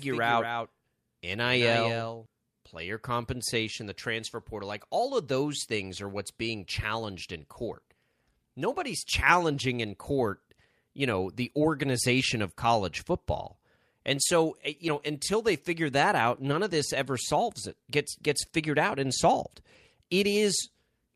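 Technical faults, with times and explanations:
0.0–2.26 s, doubled audio track: The speech is likely being picked up a second time through a slower path, so a full-band copy runs about a fifth of a second behind the original and roughly 5 dB quieter. Every syllable gets a flat, dry echo with no room tail, unlike a natural reflection. The doubling is already present when the clip begins and stops abruptly just before "player compensation the transfer", after which the speech is heard once.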